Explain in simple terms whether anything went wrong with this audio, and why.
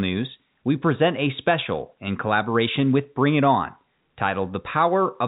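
Nothing stood out on listening to this speech, which has the narrower sound of a fixed-line telephone call.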